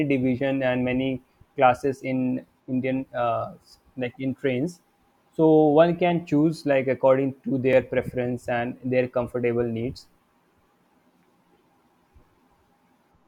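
A speech recording with one block of digital silence at 7.73 s: likely because the output buffer briefly went unfilled, about 1.3 ms of samples, consistent with a 64-sample block, dropped straight to silence and back without any fade, leaving a single tick or dip in the speech.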